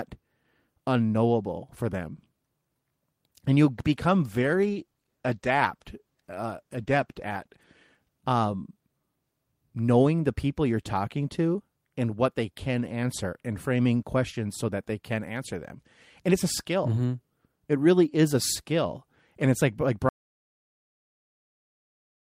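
From 3.75 to 7.69 s the speech turns rough and watery, with the top end dulled. This is a call bitrate drop: the encoder fell from 32 to 15 kbps for nearly four seconds. The whole band degrades together and then recovers, unlike a fixed low-pass filter.

At 20.09 s the audio cuts abruptly to complete silence and stays silent to the end, with no room tone or fade. That dead silence marks an audio dropout to silence, likely a lost input or stray mute rather than a gate closing on quiet sound.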